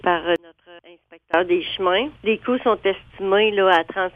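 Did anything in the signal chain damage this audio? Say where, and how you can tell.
Yes. From 0.36 to 1.34 s the sound falls by about 26 dB and what remains is a faint copy. The centred content has nearly vanished. That is the signature of one channel inverted, likely from a polarity-reversed lead in the analogue wiring. Whatever is common to both channels cancels when they are summed to mono, leaving only their difference. A dropout or gain fault would go silent or shrink evenly instead of hollowing out.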